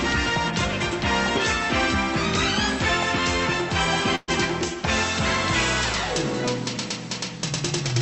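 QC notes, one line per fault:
4.15–4.31 s, burst of packet loss: the last sound is held and faded for about 120 ms, then audio resumes with that stretch missing.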